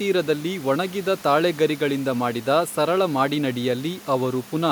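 Speech recording with no technical faults to report.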